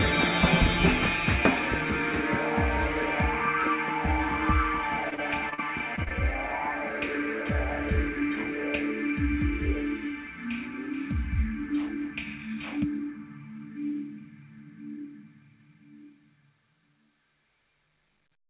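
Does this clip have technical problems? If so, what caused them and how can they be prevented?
Yes. From 5.1 to 5.6 s there's repeated packet loss (robotic sound): four gaps, the longest 40 ms, each patched by extending the last sound, so it goes choppy.

A wired connection or a bigger jitter buffer would keep packets from dropping out like that.

Right after, three short concealed packet losses at 5.96–6.09, 6.04–6.08 and 6.09–6.12 s each lose about 20 ms, filled in by continuing the previous sound, which smears it briefly.

Same fix: steadier network and some forward error correction so lost packets get rebuilt.

The call path itself, narrowband with nothing above 4 kHz, fits G.711 A-law.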